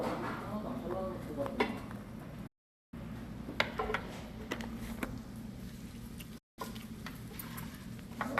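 Everyday sounds drop abruptly to silence twice, at 2.47 to 2.94 s and again at 6.38 to 6.59 s. Each cut is a very short fade of about 8 ms, and the sound picks up later with nothing in between. It is a digital broadcast dropout: the receiver lost frames and muted until good ones arrived. The gaps of 456 ms and 192 ms point to runs of roughly 24 ms frames being discarded.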